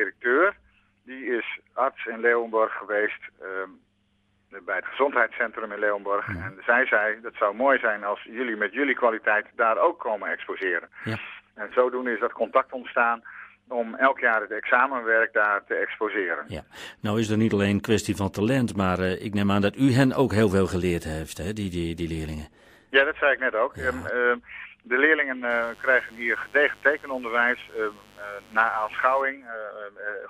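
From 25.50 to 29.22 s a mains buzz sits well below the audio: switching spikes on 50 Hz mains give a raspy, kilohertz-reaching edge, unlike a smooth low hum.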